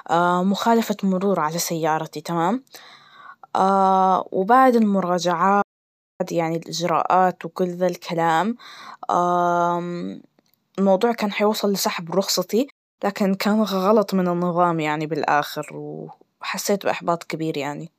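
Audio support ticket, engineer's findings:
Playback stall, 5.61 to 6.21 s: player likely starved of data or blocked, output dropped to silence for about 0.58 s, speech resumes at "يعني الإجراءات وكل ذالكلام". Second playback stall, 12.70 to 12.99 s: same likely cause, roughly 0.28 s gap between "كان حيوصل لسحب رخصتتي" and "لكن كان".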